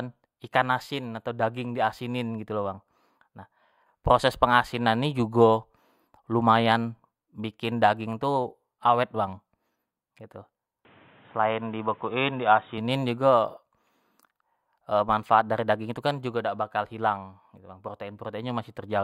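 Speech, with a band-limited stretch from 10.85 to 12.78 s. Nothing above 3.8 kHz gets through there, so the sound turns dull and boxy, with faint new background noise. There is no gap and no level jump. The input likely switched to a poorer device.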